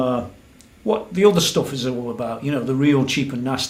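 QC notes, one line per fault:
No faults found.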